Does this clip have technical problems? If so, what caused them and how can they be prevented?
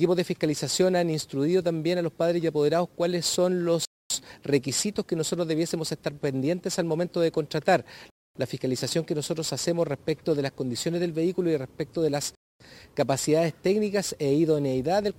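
Yes. The clip has a gap between chunks: the audio was handled in 4-second chunks, and a quarter-second of silence was inserted at each join instead of the next chunk following seamlessly. Nothing is lost, but the sound stops dead for 250 ms at 3.85 to 4.10 s, 8.10 to 8.35 s and 12.35 to 12.60 s, giving hard-edged holes at a steady rhythm. Buffering the next chunk ahead and stripping codec padding so chunks join back to back would prevent it.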